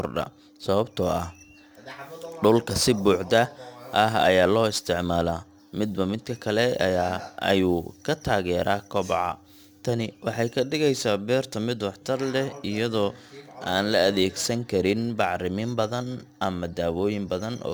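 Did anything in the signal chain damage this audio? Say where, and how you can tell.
Yes. The damage happened at sample-rate conversion, a crude rate conversion applied across the whole speech clip. Throughout, a gritty, inharmonic fizz follows the louder and brighter parts of the sound, sitting roughly 25 dB below the signal. Samples were picked by nearest neighbour, with no filtering. The periodic drop pattern fits a 48 kHz to 44.1 kHz conversion. On a spectrogram, faint aliased components mirror the speech harmonics at unrelated frequencies. On the waveform, the steps look slightly jagged.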